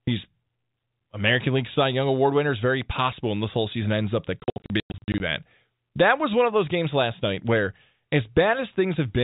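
Just after "season ends up that", from 4.40 s to 5.20 s, the speech breaks up through packet loss filled with silence. Packets never arrived, and the receiver played dead silence in their place. About 440 ms of the 800 ms stretch is missing, in gaps up to 100 ms long, which fits 20 ms packets. Each gap starts and stops abruptly, so the speech stutters. The narrow telephone band of G.711 coding is unchanged in the speech around the gaps.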